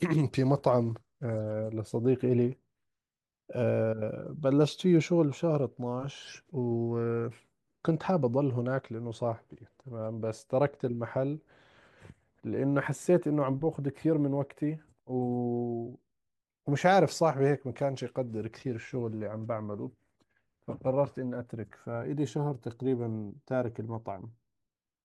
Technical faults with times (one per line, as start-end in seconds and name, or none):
none